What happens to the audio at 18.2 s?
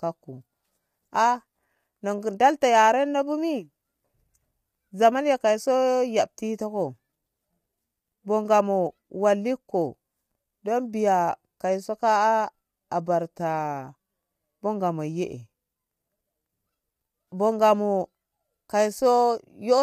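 At 18.2 s you're hearing the same grainy roughness that runs through the whole clip, likely low-delay AAC compression at a rate that fits around 32 kbps. Its short frames smear the pitch harmonics, so noise fills the gaps between them and the speech sounds coarse.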